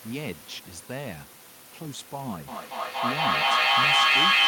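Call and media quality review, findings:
Feedback echo between two devices from 2.48 s to the end. Repeats every fifth of a second or so, building up rather than decaying, peaking about 15 dB over the speech. Second device in the room replaying this mic; local AEC can't cancel it.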